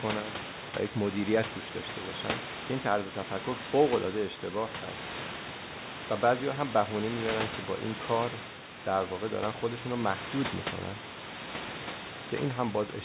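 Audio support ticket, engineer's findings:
No faults found: speech band-limited to 4 kHz through the WebRTC call path, consistent with G.711 mu-law at 64 kbps, after normal call microphone processing, with room noise sitting about 11 dB below the speech.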